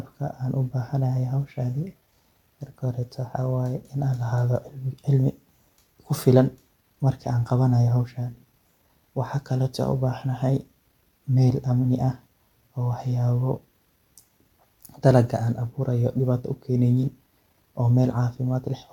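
No technical faults can be heard anywhere in the speech recording. From its first moment to its last, nothing in the audio calls for comment.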